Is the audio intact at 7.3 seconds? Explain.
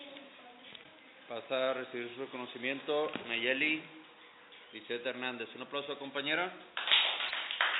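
No. From 7.28 to 7.31 s, a likely broken MP3 bit reservoir, where a frame borrowing from a missing earlier one decodes stray data, makes the audio skip ahead with a brief garbled glitch.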